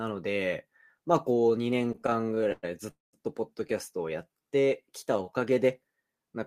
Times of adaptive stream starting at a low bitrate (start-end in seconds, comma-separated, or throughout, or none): none